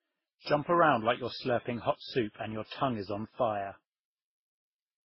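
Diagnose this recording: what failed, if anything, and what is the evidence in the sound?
Transcoding between lossy codecs, throughout the speech. The fault sits at the codec stage: the speech has nothing above 5.6 kHz and carries several kinds of coding damage at once. The artefacts of the different encodes are heard together. The likely cause is a chain of low-bitrate encodes, perhaps MP3 then Opus then Vorbis. Each later encoder spent its scarce bits reproducing the previous one's artefacts and added its own, while the lowest band limit in the chain stayed in place.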